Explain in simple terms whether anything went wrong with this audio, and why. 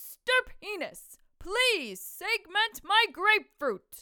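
Nothing went wrong here; there are no glitches, dropouts or other technical hiccups to point to anywhere in these sounds.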